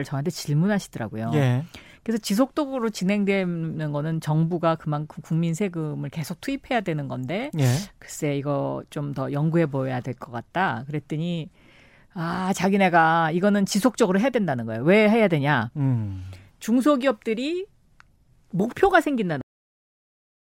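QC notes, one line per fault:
19.41 s to 20.49 s, cut-off end. The speech stops abruptly at 19.41 s, partway through a sound rather than at a natural pause. There is no decay or tail, just an instant drop to digital silence. That silence holds for the last 1.1 s of the clip. The final stretch of audio was never written out or played back. The stream was cut before its last buffers reached the output, so the sound simply ends mid-syllable.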